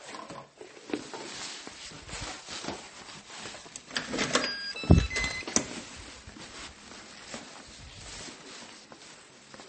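From start to finish the audio carries two layers of compression damage heard together: a hard ceiling with nothing above 8.4 kHz, a smeared, swirly grain, and a second, glassier warble laid over it. That combination points to transcoding between lossy codecs, likely a low-rate MP3 stage, around 32 kbit/s, re-encoded as AAC-LC near 64 kbit/s. The later encoder spent its bits reproducing the earlier artefacts and added its own, and the first stage's band limit persisted.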